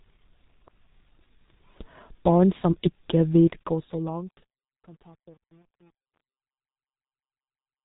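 From the first moment, the speech runs through a G.723.1 codec. Nothing above 3.8 kHz gets through. The low rate points to roughly 6.3 kbit/s, and the damage is heavy. The codec works in long frames and updates its model of the voice slowly. So consonants smear together and lose their edges. The voice comes out muffled and hoarse. Fast sounds blur where the model cannot keep pace.

At 3.31 s, just after "som ikke", truncation distortion on a fade begins. The level slides down smoothly in a fade-out from 3.31 s to the end at 7.85 s. But the gain stage keeps too few bits and adds no dither, which fits about 9-bit resolution. As the level sinks, the waveform collapses into coarse square steps. From 4.19 s to 7.85 s it is worst. The tail turns gritty.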